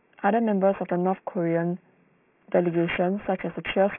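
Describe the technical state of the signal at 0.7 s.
At 0.7 s, as throughout, aliasing from unfiltered downsampling (16 kHz to 6 kHz) folds content above 3 kHz back as gritty, unrelated tones roughly 15 dB down, unlike clean, dull band-limiting.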